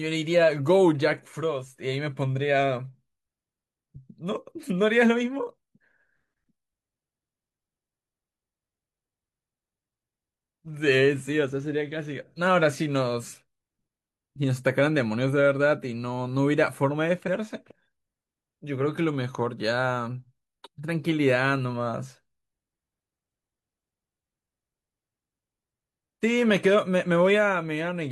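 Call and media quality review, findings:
Damaged data in a compressed stream, 17.23–17.29 s: brief glitch over the speech. Decoder misreads corrupted frames, loses sync, resumes at the next frame header.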